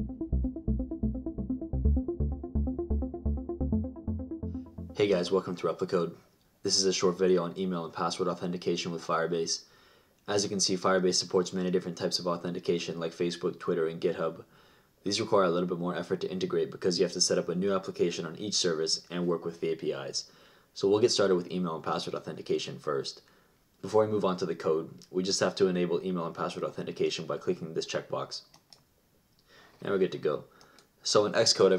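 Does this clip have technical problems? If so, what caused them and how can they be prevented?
No, nothing in the recording points to a capture, transmission or processing fault, so there is no cause to trace and nothing to prevent.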